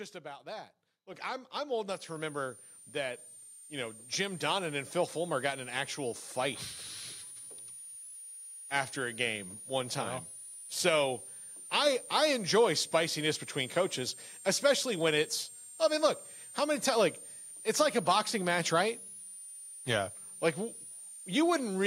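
At 1.14 s, between "about that" and "I'm I'm old", the microphone volume is stepped up. The call software judged the input too quiet and raised the device gain in a single jump of about 7 dB, so speech and room noise get louder together. On a waveform the envelope widens abruptly at that instant and stays wider. A spectrogram shows every band, including the noise floor, brightening at once.

From 1.93 s, right after "I'm I'm old", a switching supply whistle sets in and runs to the end of the clip. A power supply is cycling in an audible burst mode, or beating against another, and leaking a thin, high whistle. Its pitch wanders between roughly 8.6 and 9.9 kHz, in the region of 10 kHz, and sits roughly 20 dB below the speech. On a spectrogram it is a narrow, wavering horizontal line, continuous through speech and pauses.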